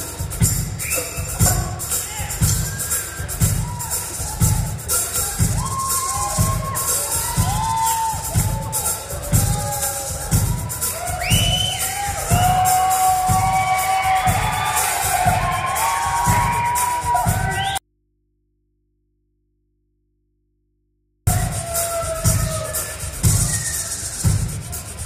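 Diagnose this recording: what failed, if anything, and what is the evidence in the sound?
Audio dropout to a faint residue, 17.78 to 21.27 s: the signal cuts abruptly to mains hum about 45 dB down, likely from an open analogue input connection.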